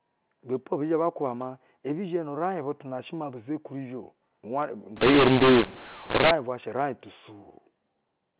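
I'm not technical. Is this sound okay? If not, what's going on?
No. From 4.96 to 6.31 s, the telephone speech turns harsh and distorted, with hiss in the gaps: a mu-law and A-law mix-up, where A-law telephone audio was decoded as mu-law.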